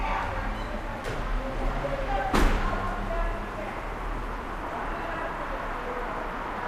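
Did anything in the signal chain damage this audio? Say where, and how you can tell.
No, nothing in the signal chain damaged this audio.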